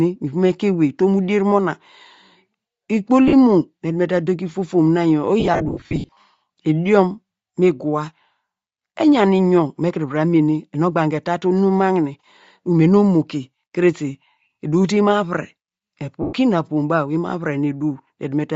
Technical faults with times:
0.00-18.55 Bluetooth LC3 compression
3.28-3.34 lost LE Audio frames
5.40-6.20 lost LE Audio frames
16.22-16.33 lost LE Audio frames

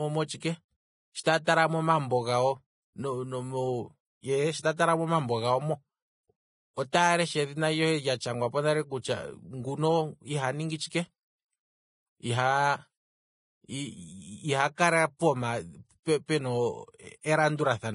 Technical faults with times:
0.00-17.94 Vorbis compression
1.23-1.26 pre-echo

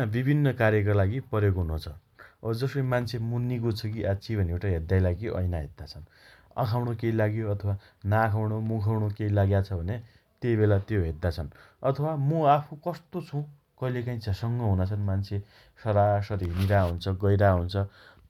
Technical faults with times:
none

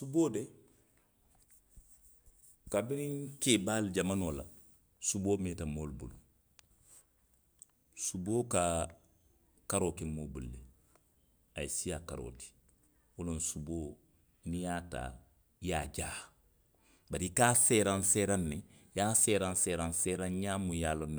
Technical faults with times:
none

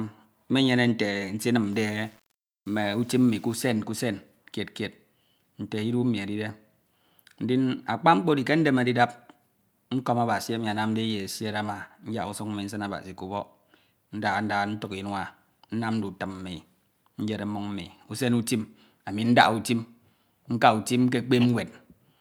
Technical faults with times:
1.73-3.69 low bit depth without dither

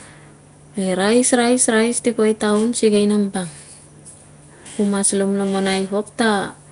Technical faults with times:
0.00-6.72 Nellymoser compression

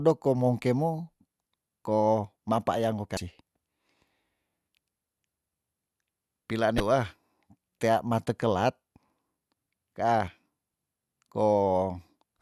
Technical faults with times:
3.14-3.17 damaged data in a compressed stream
6.77-6.80 damaged data in a compressed stream

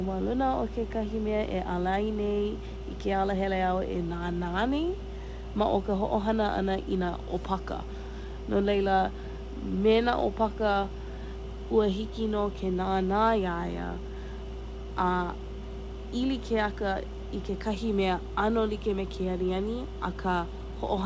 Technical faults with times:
none

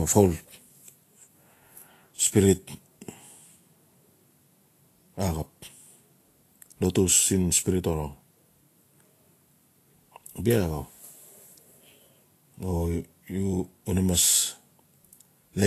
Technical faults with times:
0.00-15.67 Vorbis compression

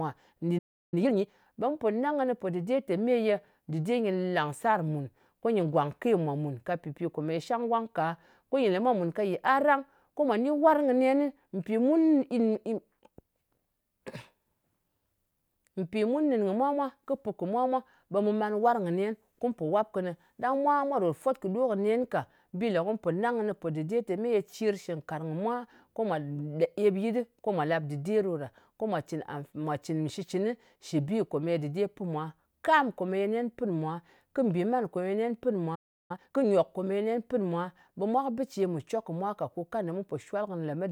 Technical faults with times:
0.58-0.94 playback stall
0.94-1.26 time-compressed catch-up
35.75-36.11 playback stall
36.11-36.45 time-compressed catch-up

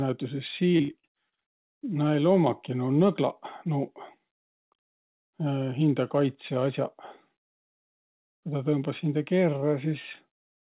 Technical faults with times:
0.77-1.91 repeated packet loss (robotic sound)

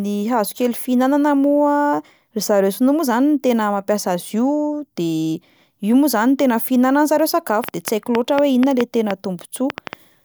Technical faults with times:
7.64-9.94 train of clicks

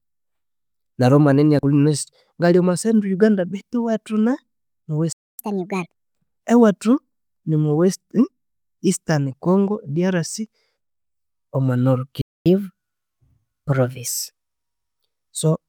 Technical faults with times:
5.12-5.39 playback stall
5.39-5.92 catch-up at higher speed
12.21-12.46 playback stall
12.46-14.07 catch-up at higher speed

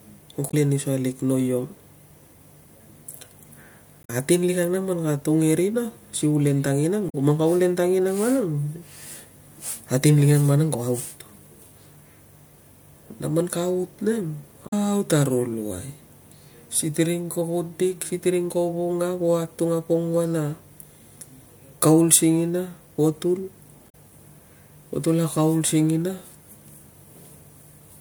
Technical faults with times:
0.47-0.54 damaged data in a compressed stream
4.01-4.10 damaged data in a compressed stream
7.06-7.15 damaged data in a compressed stream
14.65-14.73 damaged data in a compressed stream
23.89-23.95 damaged data in a compressed stream

